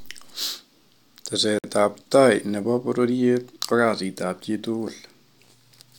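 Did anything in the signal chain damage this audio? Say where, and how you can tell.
Yes. At 1.59 s the speech drops to dead silence for 54 ms, resuming at 1.64 s. This is likely a Bluetooth stall on the wireless playback link: interference delayed packets, the headphone buffer emptied, and output paused until retransmitted audio arrived.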